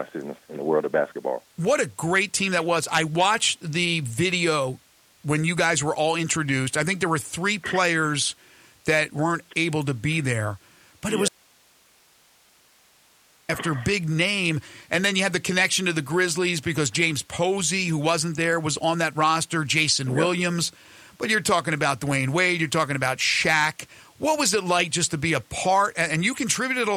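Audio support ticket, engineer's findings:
Audio dropout to a faint residue, 11.29 to 13.49 s. Signal feed likely lost upstream while downstream path stayed live. Sound cuts off abruptly for 2.2 s; gap holds only hiss, roughly 35 dB below signal level, then returns mid-flow.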